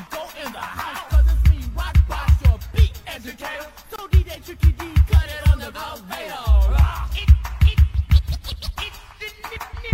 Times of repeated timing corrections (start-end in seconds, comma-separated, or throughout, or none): none